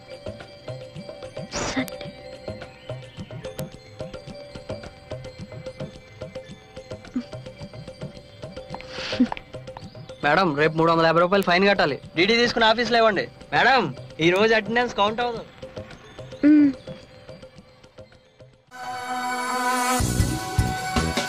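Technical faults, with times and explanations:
1.88 s, 3.59 s, 11.43 s, 14.36 s: bit error spike. A flipped bit throws one or two samples to about -3 or -9 dBFS before they snap back, giving a sharp tick unrelated to the sound, a lone needle on the waveform and a thin full-height vertical line on the spectrogram.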